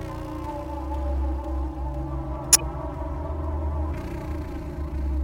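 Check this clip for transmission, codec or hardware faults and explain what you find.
One fault stands out in these everyday sounds. From 2.53 to 2.63 s a sharp, fairly loud chirping burst cuts in: a corrupt frame decoded, where bit errors across a few frames were played anyway.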